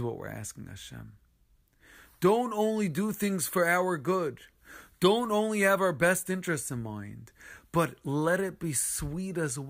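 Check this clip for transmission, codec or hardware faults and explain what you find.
No transmission, codec or hardware faults detected.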